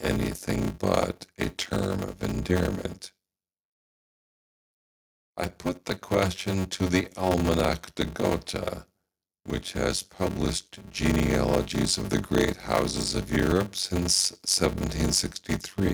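Block size mismatch (padded), throughout: short blocks are zero-filled to fit larger reads, which fits a 512-sample block, giving a 93.8 Hz buzz and speech slowed to 0.625 speed with the timbre kept.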